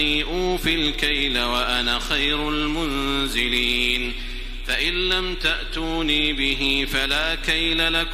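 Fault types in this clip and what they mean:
No faults found in this audio.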